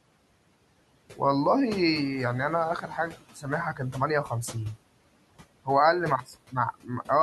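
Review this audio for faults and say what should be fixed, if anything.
Noise suppressor artifacts run through the whole speech clip. The suppressor pulls steady bands down by about 18 dB frame by frame. Room noise, about 20 dB below the speech, sinks between phrases and surges back under them. Use gentler suppression settings to prevent it.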